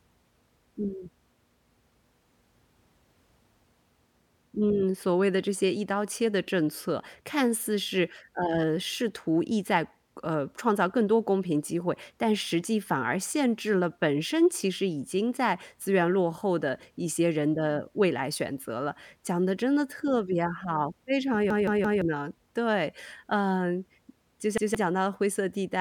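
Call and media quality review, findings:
Repeated buffer, stutters at 21.50–22.02 s (about 170 ms chunk, three extra plays) and 24.58–24.75 s (one extra play); playout underrun replaying the last block, fits an 8192-sample buffer.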